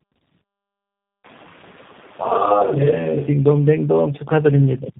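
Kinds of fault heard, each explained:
Tandem speech coding, throughout: three speech coders in a row, fitting an AMR-NB, G.726 and G.729A chain, each re-encode the previous one's already damaged output, so the errors pile up into rough, muffled, warbly speech with nothing above 3.7 kHz.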